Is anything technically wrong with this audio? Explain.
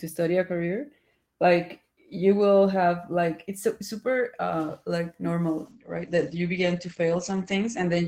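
Yes. From 5.7 s to the end, the speech turns rough and muffled, with the top end cut above 8 kHz. This is a call bitrate drop: the encoder was starved of bits, consistent with a fall from around 32 to 10 kbps.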